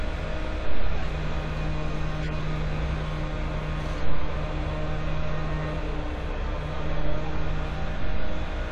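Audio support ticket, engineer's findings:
Corrupt frame decoded, at 0.98–1.05 s and 2.22–2.29 s. Bit errors in the compressed stream, but the decoder played a couple of damaged frames each time. Misread gains and codes misplace spectral energy, giving short chirp or noise bursts peaking near -20 and -25 dBFS.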